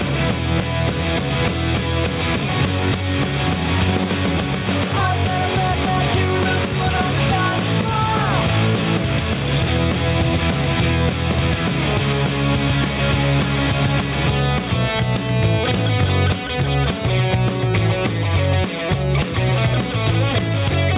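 Gain pumping runs throughout: the gain swings around 10 dB on loud sounds, likely from excessive input gain driving a fast limiter. The band stops at 4 kHz, which fits a narrowband telephone codec on the call path.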